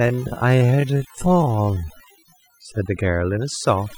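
A speech recording, and from 0.0 to 2.8 s the delivery drags, running at roughly 0.6 times normal pace while the pitch stays where it should be. The likely cause is a time-stretched section, where software lengthened the passage to fill a set duration by repeating short slices of audio instead of slowing playback, which is why the tempo changes without any drop in pitch. Across the whole clip, the background sits low, broken by small twinkling, chirping specks. That is overdone noise removal: a reduction setting pushed too far cuts individual frequency bands whenever they come close to its noise estimate, so leftover noise turns into isolated bleeps and the quieter parts of the voice are stripped away along with it.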